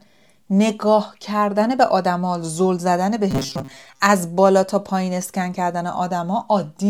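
From 3.31 to 4.02 s the speech collapses into a rigid metallic buzz at 134 Hz: robotic sound from repeated short buffers. Audio likely arrived too slowly, so the player looped a roughly 7.5 ms chunk over most of that stretch, skipping the real signal.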